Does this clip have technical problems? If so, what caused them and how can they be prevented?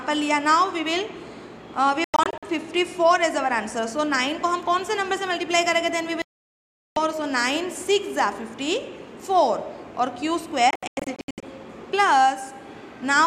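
Yes. The sound cuts to silence three times: from 2.04 to 2.43 s in several short holes, the longest 96 ms; from 6.22 to 6.97 s in one solid gap of about 0.74 s; and from 10.71 to 11.43 s, again broken into holes of up to 96 ms. This is digital broadcast dropout. The receiver lost the signal or rejected corrupted frames and muted until clean frames returned, so whatever was transmitted in those gaps is gone. A stronger, steadier reception path, such as a better-placed aerial or a higher-gain antenna, prevents it.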